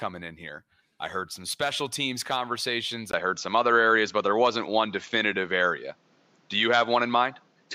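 At 3.11 s, after "some special teams conversations", a 20 ms gap opens. The speech then turns duller, with nothing above 7.6 kHz, a level shift of about 5 dB and new noise about 40 dB down. This is likely an input switched to a poorer device.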